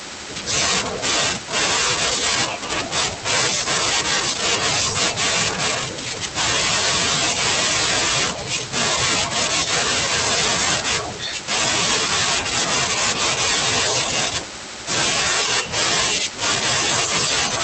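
No technical faults are audible anywhere in this recording.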